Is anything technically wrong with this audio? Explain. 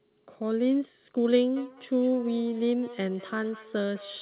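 Yes. From 1.56 s to the end, there is feedback echo between two devices. A second device in the room replays the call, and the first device's microphone picks it up and sends it back, out of the echo canceller's reach. Each syllable returns about a fifth of a second later, peaking around 19 dB below the speech and sounding thin and ringing. A spectrogram shows a faint copy of each syllable trailing behind it.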